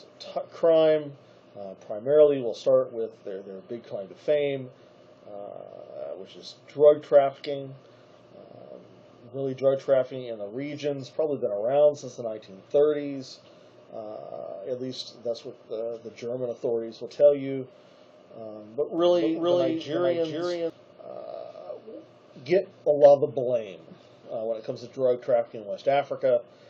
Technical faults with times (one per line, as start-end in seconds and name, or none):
18.98-20.70 doubled audio track